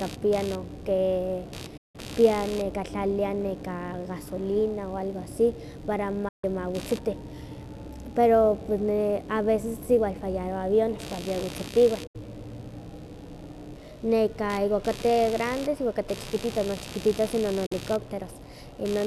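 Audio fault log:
throughout: computer activity noise. A low buzz pulsing at around 70 Hz sits roughly 20 dB under the speech and rises and falls independently of it. Processor, graphics or mouse load changes are disturbing the audio circuit's shared ground and riding into the signal.
1.77 s, 6.28 s, 12.07 s, 17.66 s: digital broadcast dropout. The speech fades out in about 8 ms and goes silent for 168, 144, 72 and 48 ms, then returns mid-flow. The receiver muted on lost or corrupt frames, and that audio is gone.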